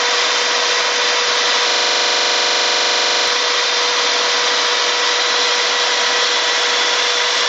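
A system hang loop runs from 1.70 to 3.28 s. One 42.67 ms slice repeats 37 times at 23.4 Hz, a rattling stutter that fits a frozen 2048-sample buffer.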